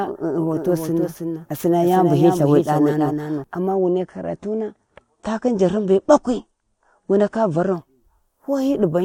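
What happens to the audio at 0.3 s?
At 0.3 s you're inside a doubled audio track, running from the start to 3.44 s. A second copy lags about 300 ms, roughly 5 dB quieter, likely from a slower duplicate capture path.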